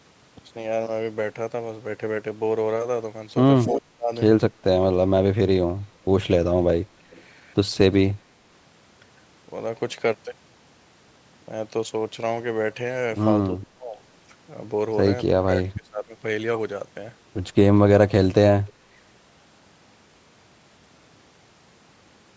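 Speech recorded over a call, with two kinds of echo-canceller trouble. Echo leak is heard as brief, delayed copies of the far side's speech, arriving about 270 to 290 ms late: at 3.74 to 3.79 s about 10 dB below the talker, and much fainter, about 35 dB down, at 7.11 to 7.23 s and 18.67 to 18.72 s. On a spectrogram these show as faint, smeared repeats of earlier harmonic patterns, offset by roughly a quarter second. The likely cause is a loudspeaker whose pickup the canceller did not fully remove. Speech suppressed in double talk shows as the talker's level sagging or breaking up while the other side speaks. The deepest drops are about 30 dB at 3.74 to 4.11 s and 15.33 to 15.48 s, about 25 dB at 13.53 to 14.01 s, about 20 dB at 15.64 to 16.12 s, and a shallower dip of about 10 dB at 6.98 to 7.08 s. On the waveform these look like sudden notches in the envelope, and on the spectrogram as gaps or thinned energy across the band up to the 8 kHz ceiling of the call processing. 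The likely cause is the canceller mistaking the talker for echo and attenuating both.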